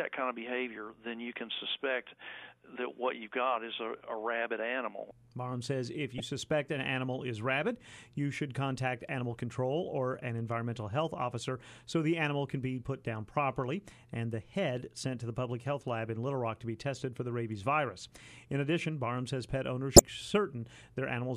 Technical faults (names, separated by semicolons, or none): damaged data in a compressed stream